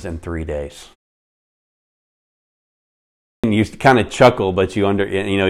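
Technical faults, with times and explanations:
3.29–3.44 s, clipped start after a pause: "you kind of" begins abruptly, its first 146 ms swallowed while the output device woke from sleep after a 2.4 s pause.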